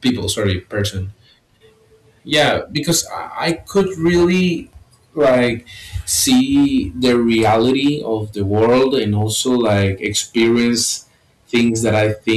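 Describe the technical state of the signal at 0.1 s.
Hard clipping runs through the whole clip, including 0.1 s: the speech is driven about 9 dB past full scale, so roughly 4 percent of samples are flattened, adding harsh fuzz.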